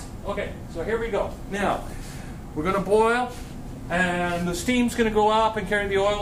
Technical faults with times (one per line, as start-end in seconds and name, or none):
1.56-2.09 DAB burbling
3.71-3.94 DAB burbling